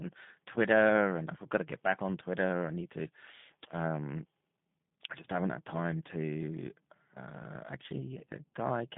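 From the first moment to the last, the speech carries the unmistakable signature of a G.729 codec. The band is squeezed to roughly 150 Hz up to 3.6 kHz, so there's no air or sibilant sparkle at all, and the voice has that slightly rough, synthetic edge you get when speech is rebuilt from a vocal tract model and a few pulses per frame, which fits an 8 kbit/s telephony link. The damage is plainly audible throughout.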